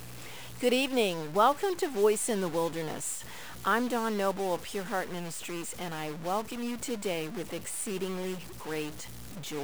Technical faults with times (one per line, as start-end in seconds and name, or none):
0.00-9.63 stuck bit